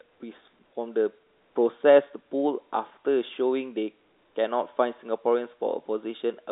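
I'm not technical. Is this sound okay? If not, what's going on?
Yes, this is ordinary telephone-line speech, with the narrower, slightly boxy sound a landline gives because nothing much above about 3.8 kHz gets through, and nothing in it points to a technical problem.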